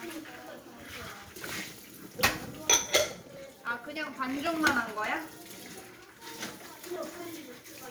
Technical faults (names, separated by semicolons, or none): periodic USB or driver dropouts